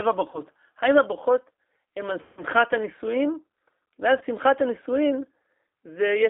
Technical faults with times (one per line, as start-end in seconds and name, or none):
0.00-6.29 G.729 codec
0.31-0.42 VoIP packet loss concealed by the speech codec
2.22-2.43 VoIP packet loss concealed by the speech codec
4.18-4.23 VoIP packet loss concealed by the speech codec